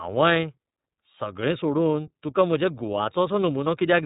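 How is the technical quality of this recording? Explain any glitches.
Quality is limited by a plainly audible codec throughout. The iLBC codec, here in its 30 ms frame mode at about 13 kbps, caps the band near 3.8 kHz. Each frame's excitation is coded independently, making the speech rough and synthetic. A spectrogram shows empty space above 3.8 kHz.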